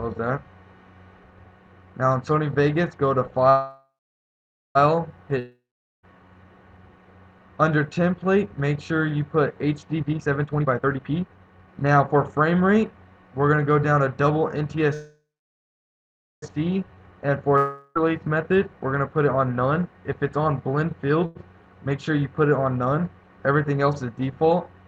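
From 3.49 to 4.77 s a call audio freeze, likely from delayed packets draining the jitter buffer, stretches the last sound into a fading buzz, then about 0.85 s of silence. The waveform flattens and the spectrogram goes blank before the sound resumes exactly where it stopped, now running about 1.26 s late.

A long network dropout follows from 5.39 to 6.05 s. It produces a brief decaying buzz and then roughly 0.43 s of silence. When the sound returns, about 0.64 s is simply gone, which shows as a hard jump in the waveform.

Between 9.97 and 13.05 s a jitter buffer speed-up plays the audio at 140% speed with unchanged pitch. Around one and a half seconds of pitch-period slices are cut out, so it sounds hurried and the spectrogram's patterns look horizontally compressed.

A second call audio freeze runs from 14.94 to 16.44 s. A fading buzz gives way to about 1.2 s of flat silence, and playback then resumes intact, roughly 1.49 s late.

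A shorter long network dropout from 17.57 to 17.97 s is filled almost entirely with decaying buzz, with barely any true silence. About 0.38 s of sound is lost, and the spectrogram shows smeared, fading harmonics ending in an abrupt seam.

Right after, from 18.07 to 19.93 s, a milder jitter buffer speed-up runs at 111%. It removes roughly 0.2 s and sounds slightly rushed at the same pitch.

Finally, a short stall from a late packet at 21.26–21.37 s holds one sound for an extra 96 ms. It is heard as a brief drawn-out buzz and seen as a repeated waveform cycle.

Throughout, the Opus call path limits the spectrogram to about 12 kHz.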